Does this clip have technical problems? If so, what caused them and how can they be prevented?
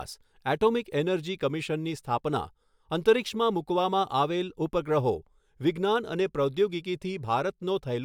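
No, nothing technical stands out in this speech clip, so there's nothing to track down or guard against here.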